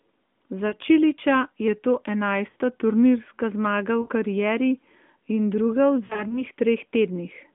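Speech over what sounds like an AMR narrowband mobile link, with the usual lean band of roughly 200 Hz to 3.5 kHz, and it has two problems. There are lost AMR speech frames at 0.68–0.74, 2.50–2.56 and 4.02–4.09 s, each a short smeared warble of about 40–60 ms where the decoder stretches its last good frame and fades the gain. From 6.06 to 6.43 s there's a scattered cluster of about 100 ms of gaps, none longer than 40 ms. Separately, from 1.68 to 3.20 s everything runs about 6% slow and drops about 107 cents, a bit over a semitone, before snapping back. That's likely a drift correction step, with clock-matching software shifting the playback rate in one jump to rebalance its buffer.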